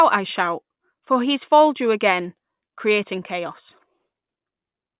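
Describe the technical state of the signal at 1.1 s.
At 1.1 s the signal is intact, with no audible fault at that point in the speech.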